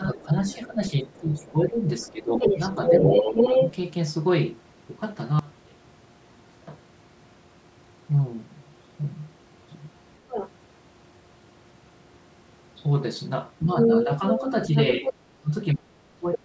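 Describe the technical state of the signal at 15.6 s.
At 15.6 s the speech sits inside a stretch of speech suppressed in double talk, running from 13.62 s to the end of the clip. The level dips and breaks into pieces, at its deepest by roughly 30 dB, adding up to about a second of lost or thinned sound. The likely cause is an echo canceller that heard both sides at once and turned everything down. Unlike packet loss, the cuts come from the canceller turning the voice down, not from missing data.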